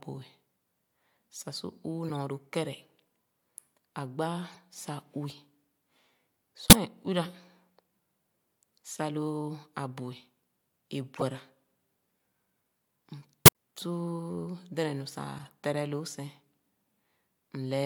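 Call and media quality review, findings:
Corrupt frame decoded at 2.08, 4.50, 6.69, 11.16, 13.45 and 15.37 s, each a brief chirp or noise burst in the speech, loudest near 6.69 and 13.45 s. Decoder likely played bit-damaged frames, misplacing spectral energy.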